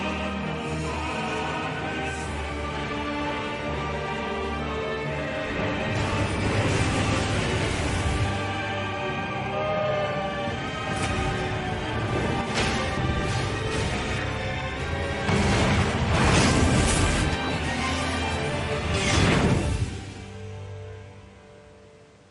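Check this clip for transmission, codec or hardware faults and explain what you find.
No transmission, codec or hardware faults turn up anywhere in this clip.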